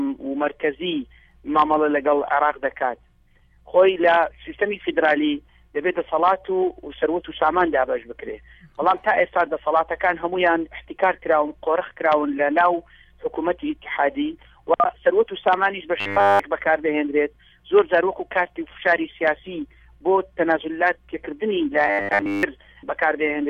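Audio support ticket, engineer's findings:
Robotic sound from repeated short buffers, 15.96–16.39 s and 21.87–22.43 s. Likely audio starvation, with the playback path looping the last 10 ms of each buffer while fresh input is skipped. Nearly all of each span is repeated material, forcing a rigid, metallic 100 Hz buzz.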